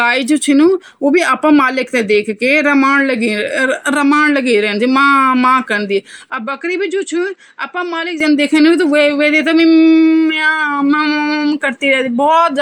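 Input switched to a poorer device, 6.3 to 8.2 s: speech loses everything above 8.2 kHz and drops about 5 dB, likely a narrower-band microphone taking over.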